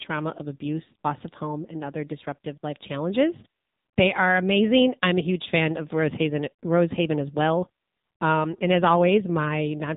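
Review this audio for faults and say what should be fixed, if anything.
The AMR narrowband mobile codec is audible throughout the speech. Nothing reaches above 4 kHz, and the voice has a buzzy, synthetic edge. The codec rebuilds each 20 ms frame from a vocal-tract model driven by a few pulses, and at the low rate heard here, which fits about 7.4 kbps, that rebuilt excitation replaces natural texture. A plain band-limiting filter would dull the top end but keep the voice's texture intact. To prevent this, capture or transmit with a wideband or higher-rate codec.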